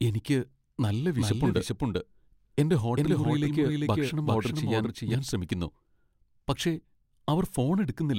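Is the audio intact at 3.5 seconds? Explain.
No. At 3.5 s the speech sits inside a doubled audio track running from 1.17 to 5.15 s, just after "എനിക്ക് നല്ല". A second, equally loud copy trails by roughly 0.4 s with no decay, most likely from a slower capture path recording the signal twice.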